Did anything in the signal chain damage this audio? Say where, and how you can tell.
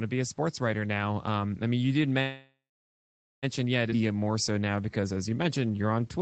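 Yes. At the network and jitter-buffer stage, packets were likely held up in transit so the buffer ran dry. Right after "I mean you did", from 2.21 to 3.45 s, a call audio freeze fills 1.2 s: the last sound smears into a fading tail, then 0.84 s of silence, and the audio resumes with nothing lost.

Audio was then dropped, in transit or by the overflowing buffer. A skip ahead at 3.91 to 3.93 s jumps over about 0.7 s of speech, and the two sides are butted together with only a 9 ms join. You hear an abrupt splice where part of the phrase is missing.

From 3.96 to 6.21 s, jitter buffer slow-down rebuilds the reserve by repeating single pitch periods and pause fragments. It adds 291 ms, so playback runs at 87% speed with the pitch unchanged. Sounds are audibly drawn out.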